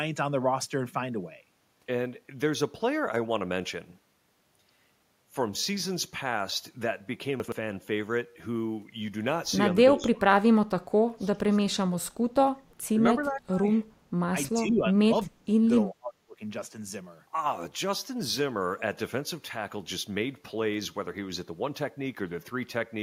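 At 7.4 to 7.52 s, chunks out of order: a 40 ms chunk plays two chunks late. The sound is briefly jumbled, and the spectrogram shows three hard vertical seams.

At 9.96 to 12.11, 12.92 to 13.02, 13.2 to 13.67, 14.53 to 15.7 and 15.86 to 16.41 s, the speech sinks by about 25 to 35 dB. The waveform shows deep notches at these points. This is likely speech suppressed in double talk.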